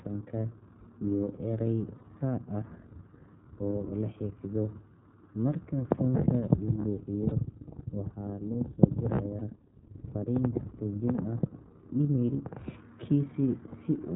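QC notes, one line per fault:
Throughout: iLBC codec. Narrowband coding leaves nothing above 4 kHz, a hard spectrogram ceiling, and plainly rough, synthetic speech consistent with 30 ms frames near 13 kbps.
1.97–2.01 s (just after "iyo eray"), 7.29–7.33 s, 9.38–9.42 s: lost iLBC frames. Each 30 ms gap is filled with a repeated pitch cycle plus noise, a brief buzzy held vowel showing as smeared, periodic striations before speech snaps back.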